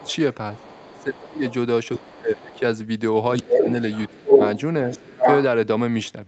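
From the start to about 2.6 s there's the other side's voice leaking through: a second voice, down at roughly 25 dB under the main talker, most likely far-end audio from the loudspeaker that the echo canceller didn't fully remove from the mic. Overlapping that, from 0.58 to 1.42 s, the talker's own speech gets pulled down in what sounds like speech suppressed in double talk, with the deepest dip around 25 dB and about half a second of that window affected. This is likely the canceller failing to tell its own talker from the loudspeaker echo, so it turns both down. The same thing happens again from 1.99 to 2.61 s and from 3.39 to 4.4 s, each time dipping by about 20 dB over roughly half a second. From 3.47 to 5.44 s the leak comes back much stronger, at about 5 dB above the talker, so the far voice actually sits on top. Everything is band-limited to 8 kHz, which fits an Opus call path at 40 kbps.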